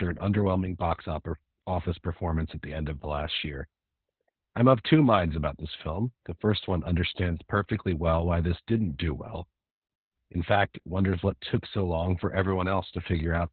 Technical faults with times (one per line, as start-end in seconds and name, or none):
0.00-13.53 Opus voice compression